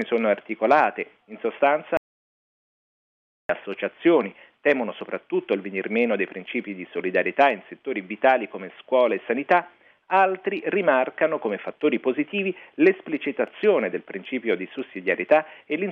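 The input signal was likely lost between 1.97 and 3.49 s while recording carried on writing silence, an audio dropout to silence. The sound cuts off abruptly, leaves about 1.5 s of silence with no room tone, then resumes mid-flow.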